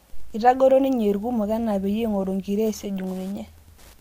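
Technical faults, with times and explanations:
Throughout, Wi-Fi interference: a steady ticking sits under the speech about ten times a second, spaced 102.4 ms apart and roughly 35 dB down. A nearby Wi-Fi radio's beacon pulses are being rectified by the audio circuitry into audible clicks.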